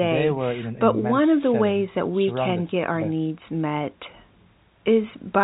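No technical faults are audible.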